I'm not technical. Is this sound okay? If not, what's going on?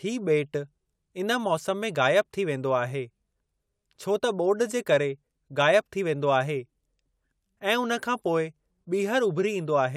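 Yes, this sound is okay. Nothing in it sounds broken or out of place, so there's nothing you need to fix.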